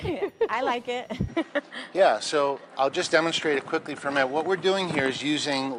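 At 1.28 s the input likely switched to a poorer device, which passes a narrower band. From there to the end the audio loses everything above 10.5 kHz and turns duller, with no gap at the switch, a faint new noise floor about 55 dB down, and little change in level.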